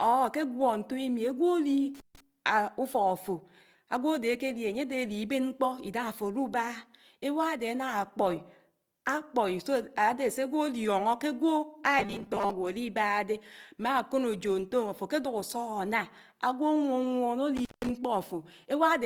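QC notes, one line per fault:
Throughout: Opus compression. The speech sounds grainy and rough, with sibilants and upper harmonics turned noisy rather than clean. The likely cause is Opus in its music mode at a rate that fits about 24 kbps, filling under-funded bands with folded or noise-like content. On a spectrogram the bandwidth stays full, reaching 20.3 kHz, but the upper bands look speckled and smeared instead of showing crisp harmonic lines, with few outright holes.
1.95–2.20 s and 17.57–17.90 s: intermittent contact. In each window the sound drops out, for about 148 ms the first time and 166 ms the second, with a crackle at the moments the connection breaks and remakes. A loose plug or cable opening the line briefly produces exactly this. On the waveform each event shows sharp spikes at both edges around a near-flat stretch. The spectrogram shows broadband vertical clicks bracketing a faint, low-level gap.
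11.99–12.51 s: robotic sound from repeated short buffers. The speech turns into a rigid metallic buzz pitched at 200 Hz while still loosely tracing the speech's contour. The likely cause is audio arriving too rarely, so playback loops the last 5 ms over and over and skips roughly half the real signal. The spectrogram shows evenly spaced horizontal harmonics at multiples of 200 Hz replacing the natural pitch. The waveform shows an obviously periodic, repeating shape.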